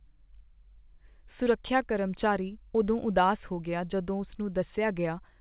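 Nothing here counts as a fault; the speech simply comes through a call path, with the top end stopping at 4 kHz as you'd expect from a narrowband codec along the lines of G.711 mu-law.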